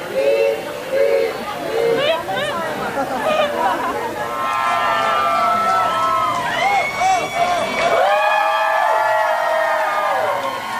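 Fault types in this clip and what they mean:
Low bit depth with dither, throughout: the audio is carried on only 7 bits, and random dither is added before each sample is rounded to that coarse grid. Instead of forming harsh, signal-tracking distortion, the rounding error is spread into a steady, even white hiss that sits roughly 25 dB below the signal. The hiss runs continuously from start to finish, the same in quiet and loud passages, with no added grit or distortion on the sound itself.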